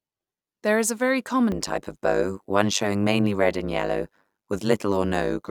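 From 1.52 s, right after "is a very", to the end of the clip, the speech carries overlap-add ripple. The reassembled frames don't sum to constant gain, so the level swings by about 60 dB roughly a hundred times a second, heard as a harsh, metallic buzz with extra tones around the voice.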